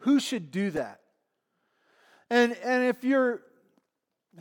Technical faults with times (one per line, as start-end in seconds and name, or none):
0.76-0.79 corrupt frame decoded